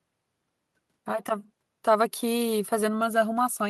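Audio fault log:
No technical faults can be heard anywhere in the speech recording.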